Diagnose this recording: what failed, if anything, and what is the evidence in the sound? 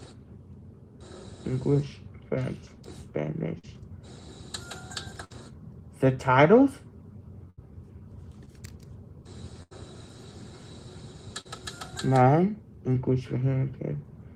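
The failure is in the network stage. There are four bursts of packet loss, at 3.59 to 3.68 s, 5.24 to 5.32 s, 7.50 to 7.59 s and 9.63 to 9.73 s. In each, the last sound is stretched into a held, fading tone or hiss for 47 to 80 ms. Playback then jumps ahead. Between 40 and 80 ms of the original is simply gone. The receiver had nothing to decode, so it extrapolated and then skipped forward.

Two shorter events are short concealed packet losses, at 8.45 to 8.49 s and 11.41 to 11.47 s. Each is a brief smear or wobble rather than a held tone. The receiver patched 15 ms at the first and 40 ms at the second by continuing the preceding sound. It then blended back into the real signal. About 20 ms and 40 ms of audio were lost. These are the same network fault on a smaller scale.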